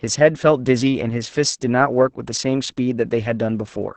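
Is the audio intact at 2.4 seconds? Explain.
No. At 2.4 seconds, as across the whole speech clip, Opus voice compression is heavy: the SILK coder at 10 kbps limits the band to wideband, leaving nothing above 8.8 kHz, and codes the excitation coarsely, so the speech sounds muffled, hoarse and slightly robotic.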